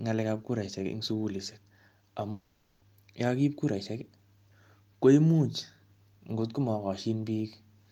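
From 2.31 to 2.83 s the speech is replaced by a smeared buzz that fades without reaching silence, likely a long network dropout with concealment filling about 0.5 s of lost audio. Speech resumes at "yakakiip kuraishek". On a spectrogram, smooth repeated texture replaces normal speech structure.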